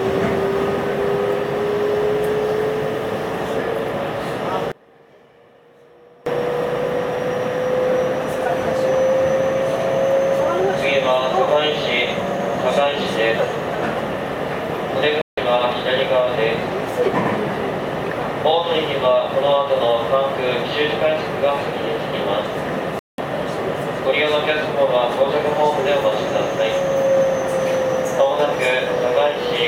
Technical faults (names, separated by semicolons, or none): one channel inverted; digital broadcast dropout